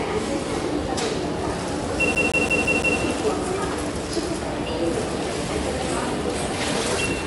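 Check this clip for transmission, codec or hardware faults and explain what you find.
Two faults are present: a codec problem throughout and a disc skip near the start.

MP3 compression: throughout, nothing above 11.3 kHz and plainly audible watery, swirling artefacts, likely from MP3 encoding at a low bitrate, around 48 kbps, which starves weak frequency lines.

CD stuck on one turn: from 2.15 to 2.99 s, a 0.17 s segment repeats five times with brief mutes, the laser jumping back one track at a scratch, giving a fast, even stutter.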